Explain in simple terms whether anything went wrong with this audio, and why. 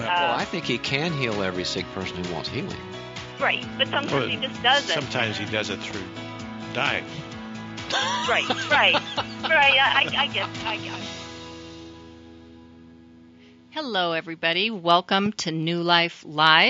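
Two loud pops break in, at 5.83 to 5.93 s and again at 15.26 to 15.42 s, each a quick double thump, the second noticeably louder. The sound carries on underneath, which sets them apart from a dropout. A likely cause is a plug, switch or static jolt.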